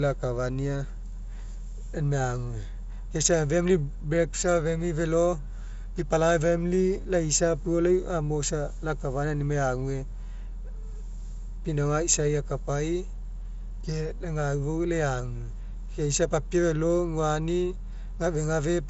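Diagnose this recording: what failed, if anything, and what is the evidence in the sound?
Nothing failed; no fault found.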